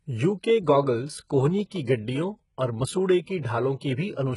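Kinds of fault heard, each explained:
HE-AAC compression: heavy codec damage, with the treble likely rebuilt from copied lower bands so s sounds turn gritty. A spectrogram shows repeated high-band patches ending abruptly near 11.1 kHz, consistent with about 12 kbps.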